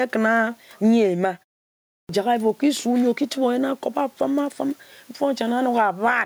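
Speech with gain pumping throughout: the gain ducks by around 10 dB under each loud syllable, likely from excessive input gain driving a fast limiter. Steady room noise would keep a constant level instead. There is also a clipped start after a pause. Following a 0.41 s gap, the sound resumes at 2.09 s with its first 0.32 s (from 1.77 s) missing, as the output device wakes too late. Muted pauses, by contrast, fade the background but never swallow the onset.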